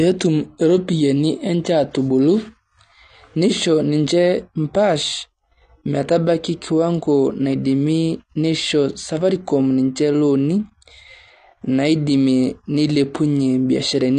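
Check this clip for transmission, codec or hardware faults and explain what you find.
One codec fault runs through the whole speech clip: AAC compression at a low bitrate.

From start to finish the speech sounds dull and smeared, with a plainly audible warbling, fizzy texture on sustained sounds and sibilants, and nothing above 9.8 kHz. The likely cause is AAC-LC encoding at a rate that fits roughly 32 kbps. With so few bits per frame, the encoder lowers its cut-off, leaves gaps in the spectrum and coarsely quantises what remains.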